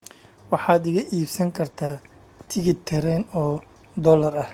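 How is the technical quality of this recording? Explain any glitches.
The speech has three brief glitches, all short concealed packet loss, at 1.71 to 1.75 s, 1.85 to 1.91 s and 2.45 to 2.49 s. In each, 20 ms, 40 ms and 20 ms of audio respectively failed to arrive in time, and the receiver filled the gap by extending the preceding sound before blending back into the real signal. Each one comes across as a short smear or wobble, and a brief consonant there can drop out.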